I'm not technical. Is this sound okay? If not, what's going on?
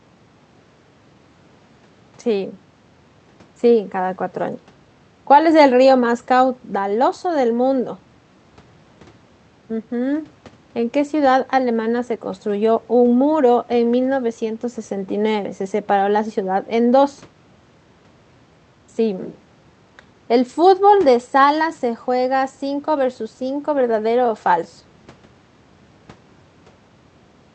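Yes, nothing is wrong with this speech recording; it came through an ordinary internet call connection that is working as it should, which keeps the sound up to about 8 kHz, a normal range for calls.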